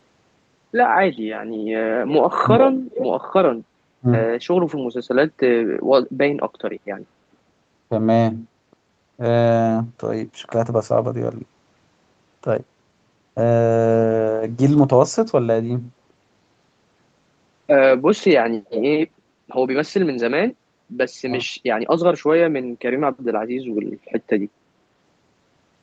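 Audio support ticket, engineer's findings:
Speech suppressed in double talk: brief dips at 1.15–1.22 s, 4.0–4.07 s and 21.44–21.48 s, each 40–70 ms, dropping by roughly 20 dB (about 25 dB at 4.0 s). Likely the echo canceller ducking near-end speech while the far end talks.

Echo leak: delayed copy of the speech at 2.9–3.06 s and 18.65–18.82 s, trailing by about 410 ms at roughly 10 dB under the direct voice. Likely loudspeaker pickup that the far-end echo canceller didn't fully remove and sent back.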